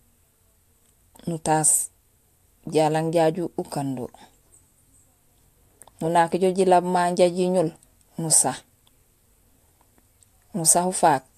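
No technical faults can be heard anywhere in this speech recording. There is nothing to place on a timeline, so no times or values need to be given.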